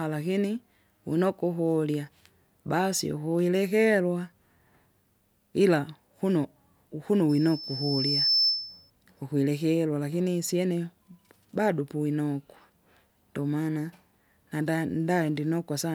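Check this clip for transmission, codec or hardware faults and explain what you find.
One hardware fault is present. From 7.29 to 8.90 s, loudspeaker feedback squeal: the microphone re-amplifies its own loudspeaker, and a 5.3 kHz tone swells over about a second to a few decibels above the speech. That swelling separates it from a steady interference tone.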